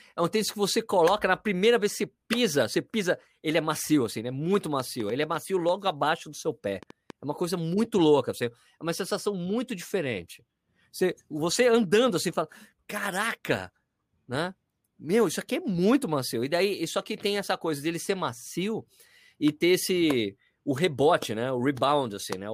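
A train of clicks runs from 4.55 to 7.11 s: about ten similar pops at an uneven 3.9 per second, peaking roughly 5 dB above the speech, likely from nearby interference.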